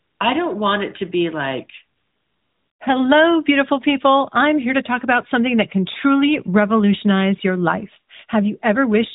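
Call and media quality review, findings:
AMR comfort noise at 0.00–0.20 s, before "I don't want it", and at 1.98–2.80 s, after "it to be like": the real background gives way to a smooth, steady synthetic hiss that switches in and out. The sender's voice activity detection judged silence and stopped sending speech frames, and the receiver filled the gap with noise built from a coarse level and spectrum description.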